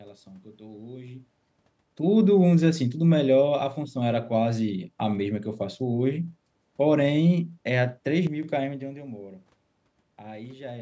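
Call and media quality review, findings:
One channel drops out, 8.27–8.43 s: speech level dips abruptly by about 6 dB for 0.16 s, then recovers. Likely one stereo leg going silent before the mono sum, halving the shared content. Separate from the talker shifting near 8.5 s.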